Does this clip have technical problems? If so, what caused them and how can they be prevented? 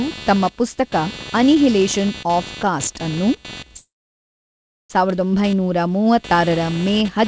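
Yes. Computer activity noise runs throughout the speech as a buzzy chirp pulsing at roughly 300 Hz, somewhat below the voice. Load on the processor, graphics card or mouse shifts the shared audio ground, so the noise follows the computer's activity, not the speech, unlike mains hum. Prevent it with a USB audio interface or a ground-loop isolator.

A call audio freeze follows "ಆಫ್ ಕಾಸ್ಟ್’ಅನ್ನು", from 3.78 to 4.92 s: a brief fading continuation, then about one second of silence. The speech then resumes where it stopped with nothing lost, which distinguishes it from packet loss. The likely cause is delayed packets draining the jitter buffer. Prevent it with a steadier, wired network connection.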